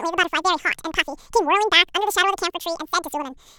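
Throughout, audio read two samples at a time (double speed) runs at 2x, an octave higher. Spectrogram harmonics spread twice as wide.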